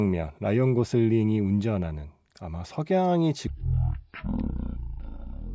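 Speech clip with a wrong sample rate fault from 3.47 s to the end. The audio abruptly slows to 0.363 times its proper speed and drops 17.6 semitones, because speed and pitch shift together when samples play at a rate other than the recording rate without conversion; the ratio fits 44.1 kHz material played at 16 kHz. On a spectrogram, harmonics and formants squeeze downward into a narrower low band, and on the waveform each syllable's envelope is stretched out in time.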